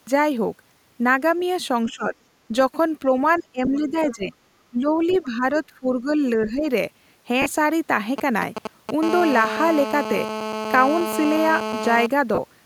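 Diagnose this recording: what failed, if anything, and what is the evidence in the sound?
Call processing: speech suppressed in double talk. The speech dips by about 10 to 20 dB at 1.87–2.15, 3.39–4.34, 4.7–4.99, 5.22–6.2 and 6.37–6.66 s. The echo canceller likely could not tell near speech from loudspeaker echo during overlap, so it attenuated both.

Call processing again: the other side's voice leaking through. A faint second voice appears at 1.88–1.92, 4.02–4.15 and 5.09–5.25 s. It sits about 25 dB, then about 15 dB, below the speech. This is likely residual echo the canceller failed to remove.

Network link: lost LE Audio frames. Short dropouts occur at 7.42–7.46 s (40 ms) and 12.35–12.38 s (30 ms). They sound smeared and noisy. The LC3 decoder repeated the last spectrum with random signs. That fits several lost 10 ms frames.

Analogue wiring: GSM signalling bursts. From 8.18 to 8.91 s there is a galloping dit-dit-dit of short buzzes at about 217 Hz, about 5 dB below the speech. 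A nearby 2G phone's intermittent radio bursts were rectified by the audio circuit.

Analogue wiring: GSM phone buzz. From 9.03 to 12.06 s a hard, raspy 217 Hz buzz with many harmonics runs continuously. It sits about 6 dB below the speech. The phone is now transmitting steadily, and the circuit demodulates each burst.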